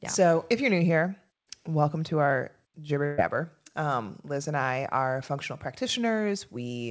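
At 3.06 s, right after "welcome to our jibber", a burst of packet loss hits this speech. About 120 ms of audio never arrived. The receiver continued the last sound and turned it down, then resumed later, skipping that stretch.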